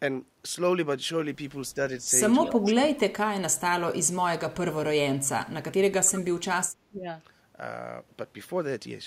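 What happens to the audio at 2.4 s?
From 2.43 to 2.51 s there's a short echo leak: a faint, delayed copy of the speech slips in, trailing the original by about 291 ms and sitting well below the main level. It's only a brief scrap, so it comes across as a quick ghostly repeat rather than a sustained echo. The likely cause is a far end on a loudspeaker whose echo canceller didn't fully scrub what its mic picked up, so a bit of it got sent back.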